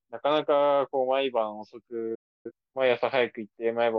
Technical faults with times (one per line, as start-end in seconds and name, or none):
2.15-2.51 digital broadcast dropout